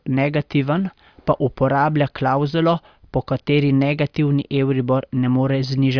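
Nothing goes wrong anywhere in this bit of speech; there's no technical fault to point to at any moment.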